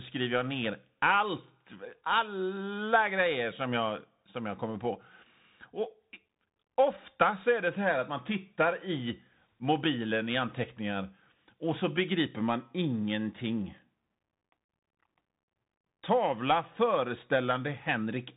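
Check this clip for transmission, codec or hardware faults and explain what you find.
One fault runs through the whole clip: the speech has passed through a Bluetooth CVSD headset codec.

For the full length, the sound is coded one bit per sample as an up-or-down step whose size adapts, which fits a 64 kbps stream. Everything above 3.8 kHz is gone, sibilants turn scratchy, and loud high passages outrun the step and distort over a granular hiss. A spectrogram shows a hard ceiling near 3.8 kHz with fine noise speckling the band below it. The waveform shows small stair-stepped jaggedness.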